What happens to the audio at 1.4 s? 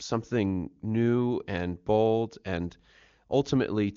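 Nothing goes wrong at 1.4 s: the speech there comes through intact, carried by the AMR wideband (HD Voice) codec at a high rate that leaves at most faint coding traces.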